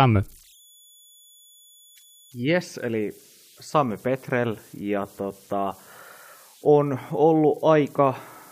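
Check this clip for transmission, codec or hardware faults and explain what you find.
One hardware fault is present, running through the whole clip: converter idle tones. A faint, thin whistle around 3 kHz sits under the speech, showing up in the pauses and turning grainy beneath quieter passages, at about 32 dB below the speech. It comes from a delta-sigma converter working without dither. With a very small input, its modulator settles into repeating bit patterns, and those cycles produce a steady tone whose pitch is set by the input's offset.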